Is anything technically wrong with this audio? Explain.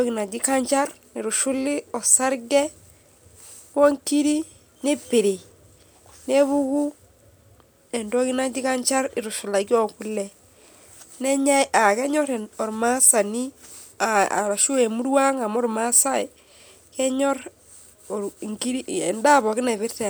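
No, nothing technically wrong can be heard in this speech recording. There is no moment in it that calls for comment.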